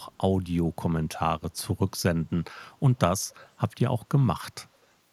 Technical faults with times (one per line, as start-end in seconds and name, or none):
0.00-0.15 echo leak
3.41-3.49 echo leak